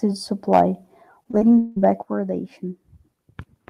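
At 0.53 to 0.61 s the loudest peaks turn harsh and crackly, their tops flattened rather than rounded. This is microphone overload: the signal runs about 4 dB past full scale, so a small share of samples in that stretch sits pinned at the converter's limit. The likely cause is an input gain set too high for the level arriving at the microphone, leaving no headroom for the strongest syllables.

From 1.23 to 1.78 s the speech breaks up into a choppy, robotic texture with pieces audibly absent. This is repeated packet loss (robotic sound): four separate gaps fall inside the span, the longest lasting 177 ms. About 227 ms is patched by stretching the preceding sound forward, which produces the robotic quality, while 240 ms simply drops out. Concealment covers roughly 42% of the stretch, so the repair itself becomes a large part of what is heard.

At 2.03 s the whole signal, speech and background alike, falls in level in a single step of about 5 dB and stays there. 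This is the microphone volume stepped down. The likely cause is the call software's automatic gain control reacting to the earlier overload by pulling the device's input volume down in one move, which explains why the drop is abrupt rather than a gradual fade.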